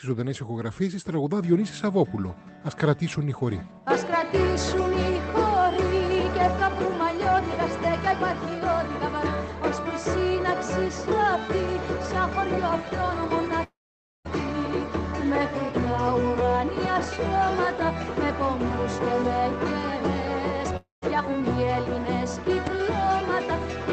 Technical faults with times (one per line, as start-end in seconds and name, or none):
13.63-14.27 long network dropout
20.77-21.04 long network dropout
22.67-22.69 loud pop